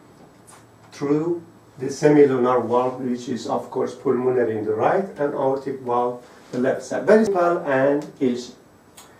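At 7.27 s there's a CD skip: the laser jumped tracks, so you get a tick from a very brief mute and the sound resumes from a different spot.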